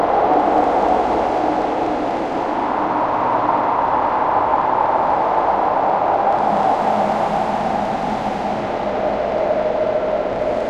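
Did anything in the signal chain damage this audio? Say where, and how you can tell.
No, nothing in the signal chain damaged this recording.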